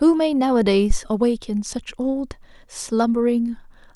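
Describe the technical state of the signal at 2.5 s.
At 2.5 s the speech signal is intact, with no audible dropout, distortion, glitch or other technical fault.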